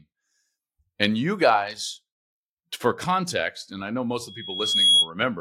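From 4.28 s to 5.11 s the speech is overtaken by loudspeaker feedback squeal: the microphone re-captures its own loudspeaker, and at 3.3 kHz the loop gain exceeds unity. The tone swells over most of a second into a piercing whistle about 10 dB above the speech.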